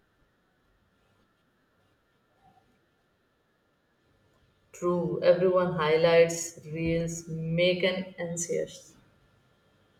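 No technical faults detected.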